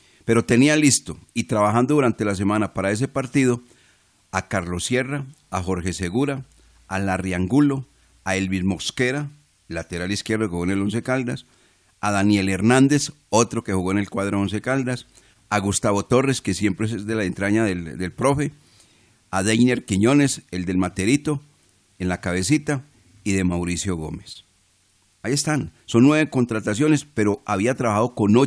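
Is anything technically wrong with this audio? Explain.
Yes. Aliasing runs through the whole speech clip. The audio was downsampled, which fits a 22 kHz rate, without an anti-alias filter, so content above 11 kHz folds back to unrelated pitches, around 30 dB below the speech. Sibilants turn gritty and metallic. A plain low-pass would sound dull, not harsh.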